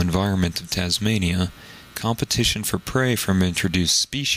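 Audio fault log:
Throughout, gain pumping: gain swings about 15 dB under loud sounds, likely a fast limiter on excessive gain, unlike slow level drift.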